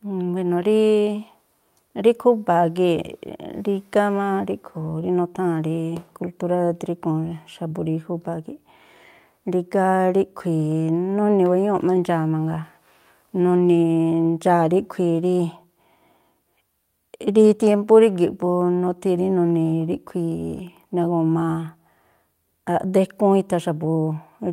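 No faults are audible anywhere in the recording.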